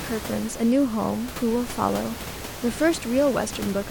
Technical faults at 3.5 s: none

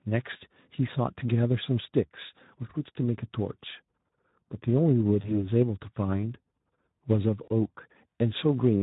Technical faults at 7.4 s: Speex codec; VoIP packet loss concealed by the speech codec

